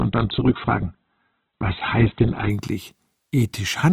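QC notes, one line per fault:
0.0–2.5 s, adaptive stream starting at a low bitrate: the opening stretch has its treble missing, leaving it dull and band-limited, with coarse, smeared codec artefacts on top. The player began on a very low rung of the stream to start playback quickly; the band limit and artefact level point to a low-rate Opus encode around 8 kbit/s. At 2.5 s it steps up without a gap to a fuller, cleaner rendition, consistent with roughly 64 kbit/s.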